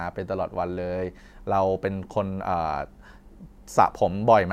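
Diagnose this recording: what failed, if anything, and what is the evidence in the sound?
Nothing failed; no faults heard.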